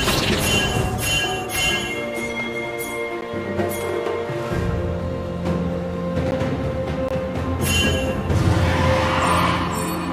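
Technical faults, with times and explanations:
3.21 s and 6.31 s, block of digital silence: each time a 10 ms run of samples was replaced by zeros. The output drops out and returns with no fade, so each edge makes a sharp discontinuity, heard as a brief tick or pop.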